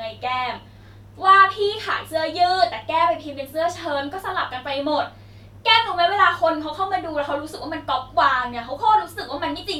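No technical faults can be heard anywhere in this speech recording, and the signal stays continuous and intact throughout.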